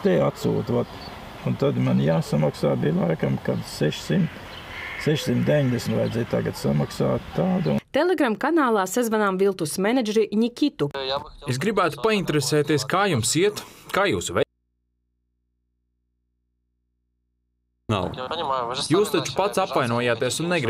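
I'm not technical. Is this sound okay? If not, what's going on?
No. From 14.43 to 17.89 s the sound suddenly vanishes for about 3.5 seconds, leaving only a faint hum: an audio dropout to a faint residue, likely a momentary signal loss.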